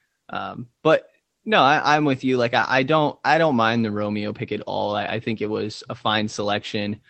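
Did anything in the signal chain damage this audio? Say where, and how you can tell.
No, nothing in the signal chain damaged this speech. It carries the character of a working call path, with the top end stopping at about 8 kHz and a coding texture that fits an Opus call at around 24 kbps.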